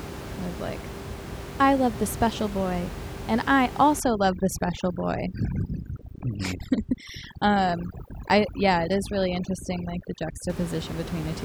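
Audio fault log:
4.00–10.50 s, overdone noise removal: the room noise, sitting about 11 dB below the speech before this point, collapses into near silence dotted with twinkling specks. Frequency bands hovering near the noise estimate are being pushed far down or switched off, taking quieter parts of the speech with them. Unlike a noise gate, which drops everything at once, the loss here flickers band by band, leaving scattered tonal remnants.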